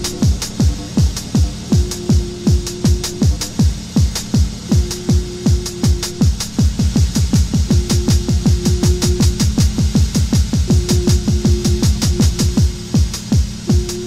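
From 6.79 to 12.57 s a doubled audio track appears: a same-level copy follows about a fifth of a second behind, likely from a second capture path. It starts and stops abruptly and has no decaying tail, which sets it apart from a room echo.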